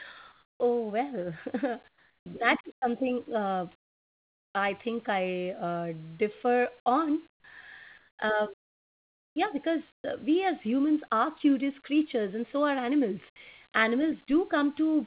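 At 0.32 to 0.60 s, just before "oh well", the real room background gives way to comfort noise, a steady, featureless hiss about 6 dB quieter than the true ambience. The likely cause is discontinuous transmission: the sender stopped sending during the pause, and the receiver synthesised noise roughly matched to the background. The same substitution recurs at 1.88 to 2.26 s (about 9 dB quieter), 3.80 to 4.54 s (about 11 dB), 7.30 to 7.44 s (about 19 dB), 7.98 to 8.18 s (about 2 dB), and 9.92 to 10.04 s, just before "uh we as humans" (about 4 dB). Each time, the room's texture flattens into uniform noise and drops in level, then the real background returns when sound resumes.

Two onsets are clipped by the voice detector. At 0.57 to 0.60 s, the first 30 ms of the resumed sound is missing. At 2.80 to 2.82 s, between "that is" and "something uh", 20 ms is missing. In both places the detector was likely slow to register that sound had restarted, so those first moments were never sent and comfort noise filled the gap. 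The result is an abrupt start with no soft attack. Throughout, the band stops at 4 kHz, which fits a G.711 mu-law call path.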